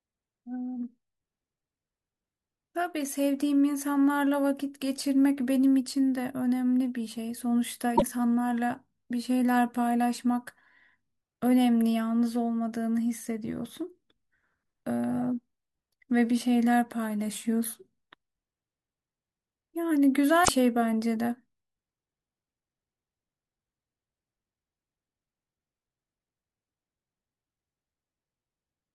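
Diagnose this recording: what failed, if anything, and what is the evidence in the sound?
The codec stage failed: damaged data in the compressed stream. Short corrupt bursts break the speech at 7.93–8.02 s and 20.41–20.49 s, each under 0.1 s. The decoder misreads the bad frames there, loses sync and resumes at the next valid frame header.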